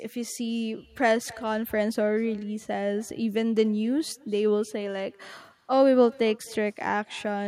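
Speech runs throughout with echo with no canceller. A faint copy returns about a third of a second later, about 25 dB down. It sounds thinner, looped back through the far end's loudspeaker.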